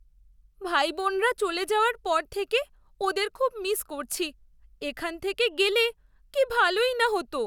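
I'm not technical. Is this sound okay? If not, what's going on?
Yes, this one's fine, and there's nothing in the recording that needs fixing.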